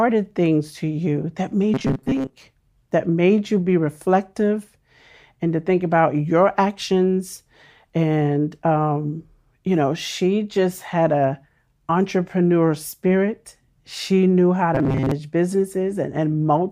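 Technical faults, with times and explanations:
1.74 to 2.34 s and 14.75 to 15.11 s, robotic sound from repeated short buffers: the speech becomes a rigid metallic buzz at 133 Hz, likely from replaying about 7.5 ms chunks over roughly half, then most, of the audio.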